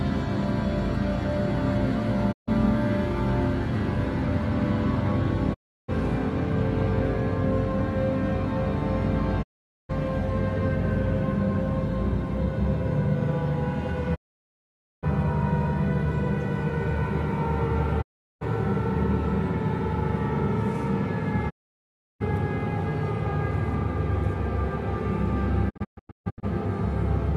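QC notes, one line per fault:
2.31 to 26.45 s, digital broadcast dropout: the receiver repeatedly lost the signal or rejected corrupted frames and muted until clean ones arrived. The sound fades out over about 20 ms and goes silent at 2.31, 5.53, 9.41, 14.14, 18.01, 21.49 and 25.69 s, for 0.14 to 0.86 s each, longest at 14.14 s. The last breaks into holes of up to 0.14 s spread over 0.72 s. Gap lengths fit frames of about 24 ms, and the missing audio is lost.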